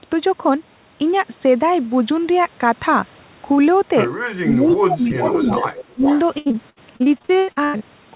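From 4.42 to 5.57 s the speech dips by up to about 15 dB, and again from 5.93 to 6.06 s by about 20 dB. That's likely speech suppressed in double talk, with the canceller ducking the talker while the far side spoke. Overlapping that, from 5.14 to 5.84 s and again from 6.06 to 6.19 s, a copy trails about 374 ms behind at about 10 dB down, likely an echo leak from a loudspeaker end. Then from 6.38 to 7.82 s comes repeated packet loss (robotic sound): 14 short holes, the longest 95 ms, patched with fill over roughly 40 percent of that stretch. Throughout, nothing sits above 4 kHz, which fits the G.711 call path.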